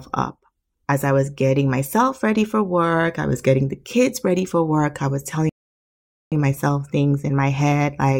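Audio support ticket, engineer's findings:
Rebuffering stall, 5.49 to 6.32 s, right after "for work I was". Speech cuts to dead silence for 0.82 s, then resumes at the exact point it stopped. Nothing is skipped; 0.82 s is simply added. Probable component: client playback buffer. Mechanism: the player drained its downloaded audio before the next segment arrived, halted output, and continued once data landed. Check network throughput and buffer prefetch depth.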